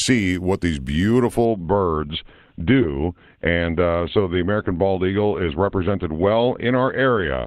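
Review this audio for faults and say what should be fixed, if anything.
At 1.45 s the speech drops abruptly, with no gap, to an adaptive stream at a lower bitrate and stays there to the end. The player switched to a low-quality version when the connection slowed. Treble above 4.3 kHz vanishes and the sound turns thin, consistent with a step down to a very low-bitrate Opus stream. On a spectrogram the upper energy cuts off sharply at 1.45 s to a flat ceiling at 4.3 kHz, while the waveform shows no break. A larger playback buffer, or a floor on how low the player may switch, would prevent it.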